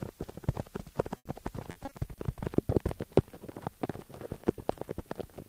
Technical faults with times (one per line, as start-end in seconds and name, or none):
1.17-1.27 burst of packet loss
1.71-2.39 repeated packet loss (robotic sound)